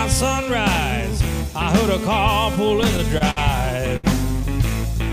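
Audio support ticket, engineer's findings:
Repeated stalls (stutter), 2.55 to 3.38 s. Audio drags and catches seven times, with about 130 ms of filler in total and the longest hold 59 ms. Jitter buffer underrunning as packets arrive late or slow. Receiver extends the last sound each time. Nothing dropped.

Short stall from a late packet, 3.96 to 4.05 s. One sound held about 71 ms too long, with a slight buzz or dip. A single packet arrived late, matching a 71 ms delay jump. Buffer ran dry and concealment stretched the audio. Resumes in place. Nothing lost.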